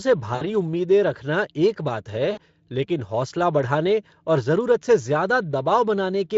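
A speech recording in which the sound twice smears into a short buzzy tone or coloured noise that fades before recovering, at 0.35 to 0.48 s and again at 2.31 to 2.40 s. This is VoIP packet loss concealed by the speech codec. About 60 ms of audio went missing each time, and the decoder filled the gap by repeating its last pitch and spectral shape at falling gain. That guess then lingers briefly as a weakened or distorted voice after the stream resumes.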